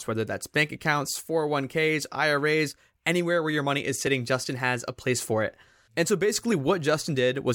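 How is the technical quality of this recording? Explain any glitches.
The speech has two brief glitches, each a small jump forward in the sound. At 4.07 s, just after "where your money is", about 10 ms is missing; at 6.52 s about 20 ms goes. Both are likely a dropped buffer (overrun), where samples weren't collected before being overwritten, so the sound on either side is spliced directly.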